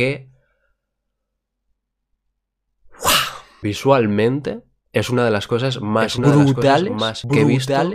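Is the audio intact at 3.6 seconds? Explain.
Yes, the audio is intact at 3.6 seconds, with no dropout, click, distortion or other fault at that point.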